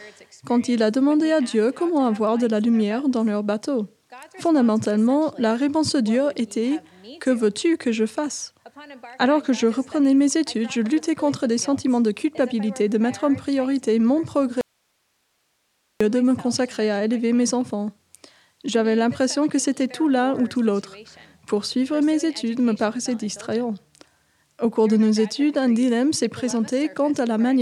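At 14.61 s the sound cuts out abruptly and stays gone until 16.01 s, a gap of about 1.39 s. This is an audio dropout to a faint residue. The wanted signal is lost, but the path after the break is still live, so the gap holds only hiss, roughly 50 dB below the signal. It doesn't sound like a pause or a fade. The likely cause is a brief break in the source feeding a still-open input.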